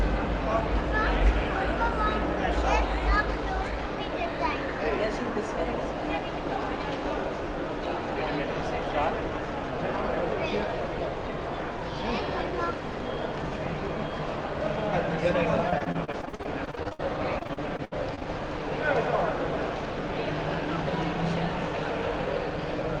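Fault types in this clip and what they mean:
Repeated packet loss (robotic sound): From 15.70 to 17.01 s and 17.39 to 18.23 s, lost audio is patched by stretching the preceding sound. It turns choppy, about a third concealed, with gaps up to 67 ms. Spectrograms show smeared, repeated slices, and waveforms show stuttering, duplicated segments.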